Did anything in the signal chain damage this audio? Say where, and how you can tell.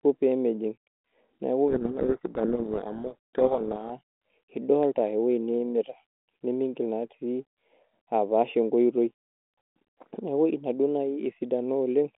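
Yes, there are two separate faults, one continuous and one confined to a short stretch.

Throughout the clip there is channel delay (comb filtering), introduced where two channels were summed to mono. The sound is steadily dull and hollow, and the coloration stays fixed regardless of level or content. That points to one channel arriving roughly four samples late, about a tenth of a millisecond, which puts the first cancellation notch somewhere around 5 kHz. Unlike codec damage, the notches never move and never follow the signal's loudness.

From 1.68 to 3.93 s there is a codec payload misread at the decoder. The sender and receiver disagreed on the bit order of the G.726 code words, so the decoder treated correctly framed data with scrambled fields as valid. The speech is buried in harsh distortion for that stretch. This differs from ordinary low-rate G.726 rasp, which tracks the speech level continuously. 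Outside that window the 32 kbit/s G.726 path adds only light coding noise within its telephone band.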